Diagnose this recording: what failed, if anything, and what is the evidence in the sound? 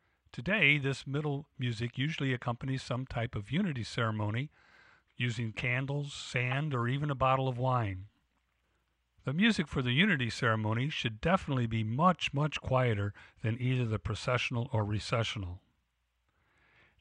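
Codec fault: corrupt frame decoded. Brief blips at 6.51 s, after "using candles", and 14.80 s, after "than either the processional". Flipped bits misplaced energy.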